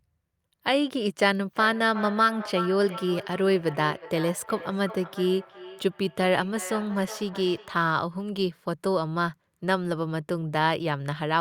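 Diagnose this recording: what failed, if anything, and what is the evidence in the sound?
Feedback echo between two devices runs from 1.53 s to 7.93 s. It is a call-processing failure: the speech keeps returning at a steady interval of roughly 0.4 s, with the loudest repeats about 12 dB below the direct voice. A second device in the same room plays this talker's audio, and the first microphone picks it back up. Each device's echo canceller only subtracts its own playback, so nothing removes this acoustic loop.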